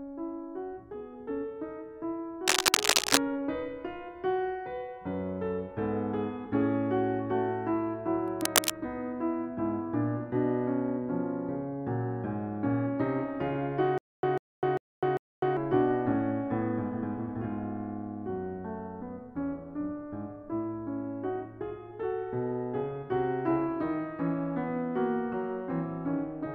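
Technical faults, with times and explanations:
2.47–3.17 s and 8.28–8.71 s, cable scratch noise: dense, uneven bursts of scratching rustle sit over the music, roughly 5 dB above it. The likely cause is a worn cable, connector or control being moved, its contact resistance fluctuating rapidly and injecting noise.
13.98–15.57 s, stutter with silent gaps: a 145 ms fragment of music repeats four times, each followed by about 253 ms of digital silence, a steady 397 ms cycle. This likely comes from a stalled player or stream replaying its last fragment on each retry, losing the intervening music.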